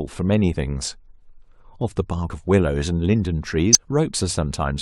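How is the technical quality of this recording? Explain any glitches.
Three short dropouts mar the speech, all from compressed frames skipped: whole frames of the encoded stream were missing or rejected by the decoder as damaged, so playback jumped ahead. At 0.52 to 0.56 s and 2.26 to 2.30 s roughly 50 ms of audio vanishes, and at 3.73 to 3.77 s about 70 ms. Each jump leaves a join where the audio resumes further ahead.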